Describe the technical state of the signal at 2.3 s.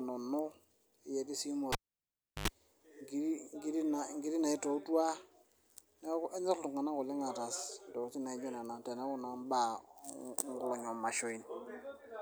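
At 2.3 s the signal is in the middle of a cable pulled and plugged in fault, which runs from 1.72 to 2.48 s. A live cable was pulled out, leaving a pop at 1.72 s and then near silence, since the connection is open. The plug is out for about 0.70 s. A 50 Hz mains buzz of about 87 ms appears while only the tip touches. A second pop follows when the sound returns at 2.48 s.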